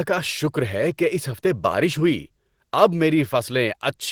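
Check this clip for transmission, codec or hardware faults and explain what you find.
No faults turn up on checking this clip.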